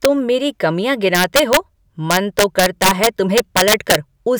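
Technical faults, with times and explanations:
Throughout, integer overflow: the level is pushed about 8 dB past what the integer format can hold, and nothing limits it, so the loudest speech peaks wrap around to the opposite extreme instead of flattening. Less than one percent of the samples go over, but each one jumps across the full range, so you get sudden violent cracks on the loud moments, harsher and more abrupt than ordinary clipping would sound.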